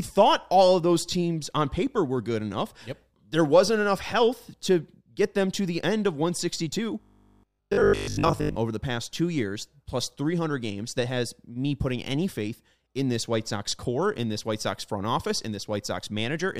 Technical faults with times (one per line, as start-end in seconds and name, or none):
7.01-8.57 robotic sound from repeated short buffers